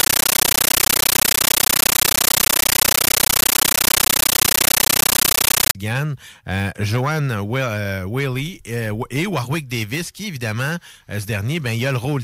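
Compressed stream played as audio runs from 0.0 to 5.75 s. An AC-3 bitstream reaches the output undecoded and is read as sample values. Each 13.3 ms burst becomes noise and then silent padding, repeating at 31.25 Hz, so loud chattering static replaces the speech.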